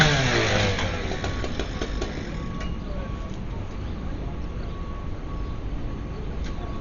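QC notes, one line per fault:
Throughout: likely Dolby Digital compression. Nothing comes through above 7 kHz, so it all sounds dull, and there's a rough, fluttery noise around tones where thinly coded bands get filled with dither. The damage is heavy, fitting a very low bitrate near 40 kbps.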